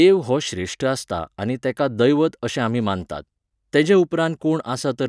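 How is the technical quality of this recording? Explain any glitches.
No glitches can be heard anywhere in this speech recording. There is nothing in the audio that calls for an explanation.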